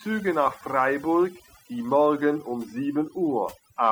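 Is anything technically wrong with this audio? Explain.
Yes. Throughout the speech, the background drops away and breaks up into twinkling, warbling specks. That is overdone noise removal. The noise reduction was pushed too hard, so any frequency band sitting close to its noise estimate gets pulled far down or switched off entirely. Quieter parts of the voice fall into that range and vanish along with the noise.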